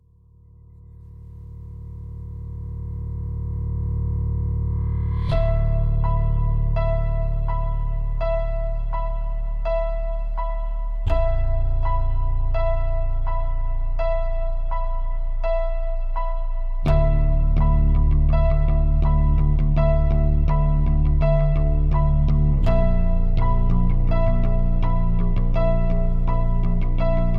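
Nothing stood out as a technical fault on listening to the audio.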